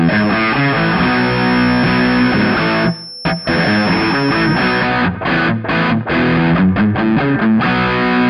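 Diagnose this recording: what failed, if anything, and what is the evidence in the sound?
An acoustic loop between a loudspeaker and the microphone, likely held just at the edge of oscillation at the analogue capture stage, produces a feedback whistle. From the start to 4.93 s a thin, steady tone near 5.4 kHz sits roughly 20 dB below the sound, swelling and fading slowly in level. The loop gain hovers just under runaway at that one frequency, so the tone keeps sounding without building, then stops at 4.93 s.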